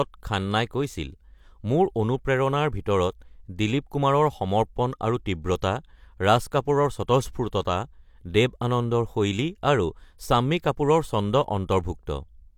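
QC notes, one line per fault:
No fault found.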